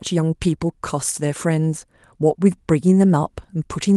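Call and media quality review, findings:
Nothing stood out on listening to the speech clip.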